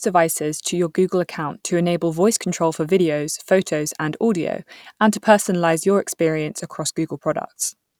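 Speech recording, no technical faults detected at any point.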